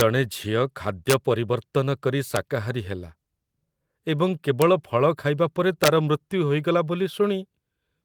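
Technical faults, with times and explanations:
0.00 s, 1.10–1.14 s, 2.36 s, 4.62 s and 5.84–5.88 s (just after "ଖାଇବା ପରେ"), integer overflow: harsh, violent cracks on loud peaks, far sharper than clipping. Samples pushed as much as about 4 dB past the integer limit wrapped to the opposite sign instead of being held at full scale, flinging the waveform across its whole range.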